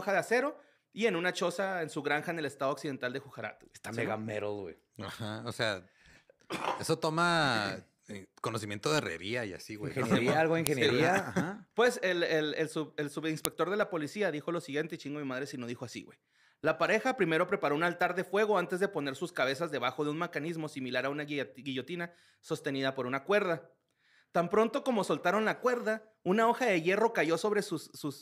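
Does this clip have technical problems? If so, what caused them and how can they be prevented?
Yes. Sharp clicks at 10.67 s and 13.45 s, just before "de la policía dijo", come from a file header played as audio: segments were joined with their WAV header bytes intact, so those bytes play as loud samples. Strip headers before concatenating or streaming raw PCM.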